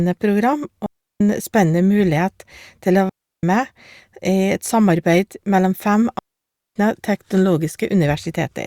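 At 0.86 s the speech drops out for about 0.34 s, then again at 3.09 s just after "til å" for about 0.34 s, and once more at 6.19 s for a longer 0.57 s. Each is a digital wireless dropout: the radio link loses too much data, so the receiver quickly fades to mute rather than play garbage. You get clean near-silent holes, with no crackle or noise burst either side.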